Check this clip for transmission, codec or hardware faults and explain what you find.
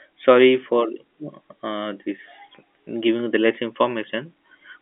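Nothing wrong found: the speech sits in a telephone band of about 250 Hz to 3.4 kHz with nothing above 3.7 kHz, as expected of G.711 telephone coding.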